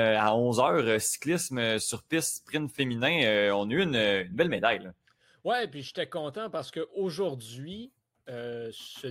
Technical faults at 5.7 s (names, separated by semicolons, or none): none